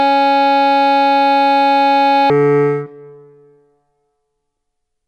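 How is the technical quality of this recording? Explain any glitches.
The recording has one clear glitch: a section at the wrong speed. From 2.30 s to the end, the music plays at 0.52 times its proper speed. Tempo and pitch drop together at that moment. Everything sounds slow and heavy, roughly ten semitones lower. The likely cause is playback or editing against the wrong clock. Each second of audio is stretched to nearly twice its length, so the pitch falls along with the tempo.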